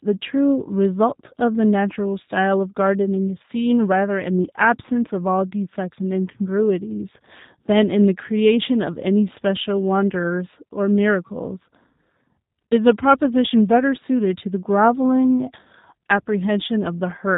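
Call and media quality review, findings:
G.729 codec damage, whole clip, plainly audible. Speech comes through intelligible but rough and a bit synthetic, nothing above about 3.8 kHz, so it sounds dull and boxy. Probable component: G.729A encode on the VoIP leg, which fits an 8 kbit/s stream. Mechanism: each 10 ms frame is rebuilt from a vocal-tract filter, a pitch predictor and a handful of pulses.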